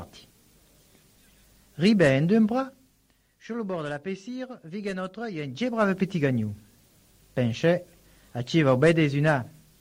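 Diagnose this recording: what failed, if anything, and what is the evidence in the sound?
Nothing in the recording points to a failure at any stage of the chain. Where the level rises or falls, it moves smoothly, like a fader being eased, with no jumps or steps along the way.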